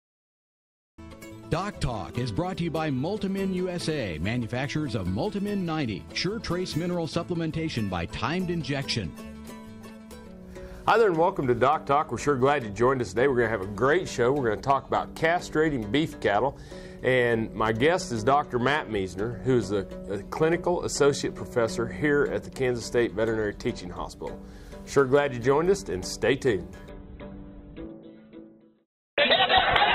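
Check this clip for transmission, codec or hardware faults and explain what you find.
One transmission fault is present, near the end of the clip. From 26.89 s to the end, the sound abruptly takes on more obvious codec artefacts, with no gap or dropout at the switch. This is an adaptive stream at a lower bitrate: the connection slowed, so the player swapped to a much leaner encoding of the same stream. The sharp drop in quality fits a change from roughly 64 kbit/s Opus down to about 8 kbit/s.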